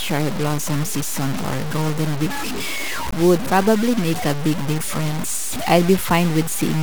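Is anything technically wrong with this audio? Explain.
Yes. The speech carries low bit depth without dither from start to finish. The grit follows the speech. Quiet sounds turn gritty, and quiet tails and pauses break up into a sputter or drop to silence. The error sits only about 10 dB below the speech, so it is hard to miss. The likely cause is truncation to around 4 bits with no dither. Each sample snaps to a few coarse steps, so the error tracks the signal rather than forming a steady hiss.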